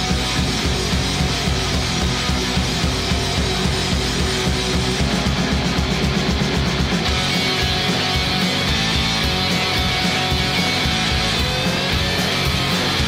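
Nothing is technically wrong with this audio; no faults can be heard anywhere in it.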